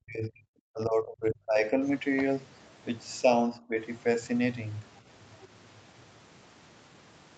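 From 0 to 1.64 s, an echo canceller likely treated overlapping talk as its own echo, causing speech suppressed in double talk: the speech is turned down for most of that span, by up to about 40 dB. A shallower dip of about 15 dB recurs from 3.56 to 3.79 s.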